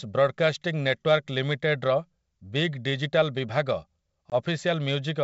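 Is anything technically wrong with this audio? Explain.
Yes. At 4.30 to 4.35 s there is packet loss on an ADPCM call. About one packet, roughly 20 ms of the speech, drops out to hard-edged silence. Because the decoder's adaptive predictor and step size lose sync with the sender's, the speech resumes with brief slight distortion, then settles. On a waveform this appears as a flat gap with abrupt edges; on a spectrogram, as a thin blank vertical band. The G.722 wideband coding around it keeps its clear band up to 7 kHz.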